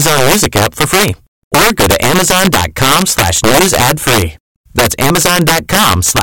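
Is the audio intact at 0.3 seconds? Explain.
No, not really. Integer overflow runs through the whole clip, so 0.3 s is affected too. The speech is pushed about 7 dB past the integer limit, and instead of clipping, the roughly 4% of samples that go over wrap to the opposite sign, giving harsh, violent cracks on louder moments.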